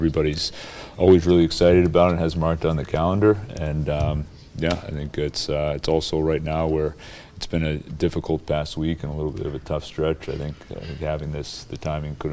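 Nothing stood out as a technical problem on listening.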